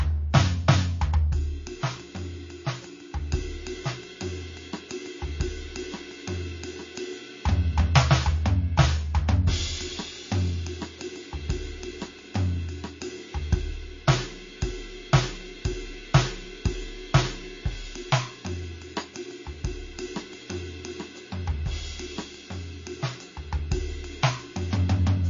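The music has most likely been through heavy MP3 compression for its whole length, with the encoder starved of bits in a way that points to a rate near 32 kbps. To save data it has removed everything above 7.2 kHz and zeroed the weaker frequency lines, which flicker in and out from frame to frame. The music sounds dull and capped, with a plainly audible watery, swirling texture, metallic chirps on bright sounds, and smeared attacks.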